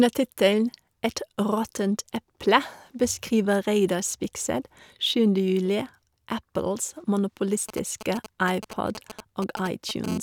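Speech carries two kinds of radio interference from a nearby 2G handset in the last few seconds. From 7.69 s to 10.06 s there are GSM signalling bursts: a galloping dit-dit-dit of short raspy buzzes, roughly 10 dB below the speech. The handset is transmitting only intermittent groups of bursts, as it does while setting up a call or message, and some stage of the audio circuit rectifies each radio pulse into an audible click. Within each group the pulses repeat at 217 Hz, which gives the brief buzzy texture. Immediately afterwards, from 10.08 s to 10.18 s, comes GSM phone buzz, a hard, harmonically rich 217 Hz rasp at about 12 dB below the speech that bears no relation to the speech itself. Here the handset is transmitting continuously in its call state, pulsing 217 times per second, and the rectified envelope of those pulses becomes a steady buzz rather than separate ticks.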